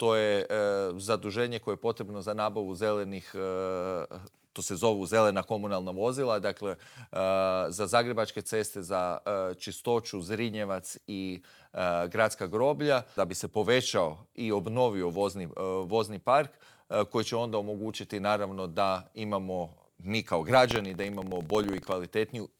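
From 20.62 to 21.93 s, buffer tearing buzzes at 21.5 Hz, fitting a 2048-sample buffer. Brief stale slivers splice in, showing as evenly spaced vertical spectrogram lines.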